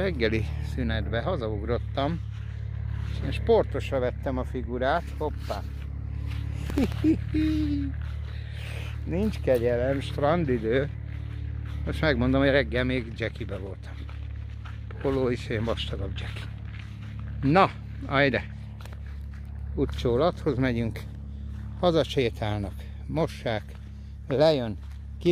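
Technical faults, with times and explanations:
6.67–6.92 s, processor overload crackle: the processor missed a handful of tiny buffer deadlines in a row, and each gap was filled with hard-edged stale audio, heard as a brief gritty crackle.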